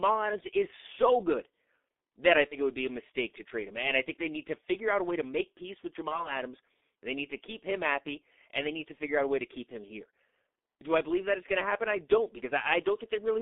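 G.723.1 codec throughout: heavy low-rate coding, which fits its 6.3 kbit/s mode, confines the sound to about 250 Hz to 3.6 kHz, leaving speech muffled and hoarse with blurred consonants.

VoIP packet loss concealed by the speech codec at 2.48 to 2.57 s, after "that I" and before "it would be a", and at 6.08 to 6.33 s, after "to make peace with": each fits a single lost 30 ms frame that the decoder bridged by extending its last pitch and filter at falling gain. This gives a brief buzzy or noisy smear, with the voice staying weakened or distorted afterward while the codec recovers.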